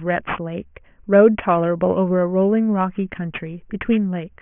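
Throughout the speech, aliasing: the sample rate appears to have dropped from 24 kHz to 6 kHz with no filter removing content above 3 kHz first. Everything higher folds back below 3 kHz as wrong pitches, roughly 20 dB under the signal, making sibilants gritty and metallic.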